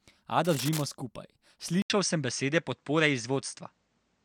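A worn cable or connector was likely being moved between 0.45 and 0.85 s, its contact resistance jumping about. That is cable scratch noise: dense, ragged bursts of scratching sit over the speech, roughly 10 dB below it, then stop.

At 1.82 s the recording was likely switched to a poorer input device, with an 80 ms gap of silence at the changeover. From there to the end, nothing reaches above 9 kHz, so the speech turns duller and boxier. The level shifts by a few decibels, and a new background noise sits around 50 dB below the speech.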